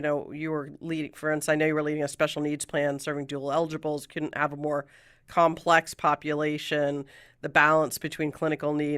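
No technical faults can be heard anywhere in this speech recording. At no point does anything in the audio stand out as an error worth flagging.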